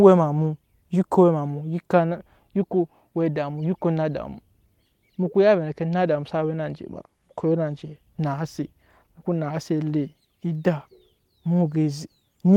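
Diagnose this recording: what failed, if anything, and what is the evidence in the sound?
Nothing in this speech recording points to a failure at any stage, so there's nothing here to diagnose.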